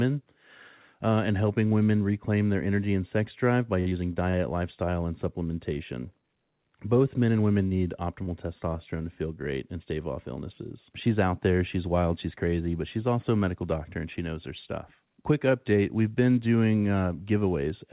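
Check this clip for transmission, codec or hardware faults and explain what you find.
Two kinds of packet loss are audible in this speech, carried over a call path whose band stops at 4 kHz, consistent with G.711 A-law at 64 kbps.

Repeated packet loss (robotic sound), 3.80 to 4.37 s, between "and sex drive by" and "lifestyle and": four gaps, the longest 55 ms, are patched by extending the previous sound. About a quarter of the stretch is synthetic, so it sounds choppy and robotic, unlike an isolated glitch.

Short concealed packet loss at 7.67 to 7.74 s, after "men and women", and at 8.23 to 8.30 s, before "testosterone to feel great": each roughly 40 ms hole is filled from the preceding sound, leaving a single brief smear rather than a run of choppy breaks.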